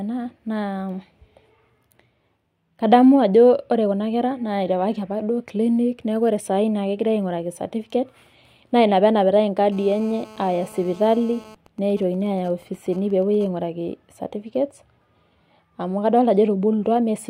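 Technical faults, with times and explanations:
9.72–11.55 s: GSM phone buzz, a hard, raspy 217 Hz buzz at about 23 dB below the speech, from a nearby phone's call transmissions rectified by the audio circuit.
11.66–13.47 s: GSM signalling bursts, even ticks with a longer 217 Hz buzz twice a second at roughly 25 dB down, as the phone's user falls silent and only short radio bursts get rectified.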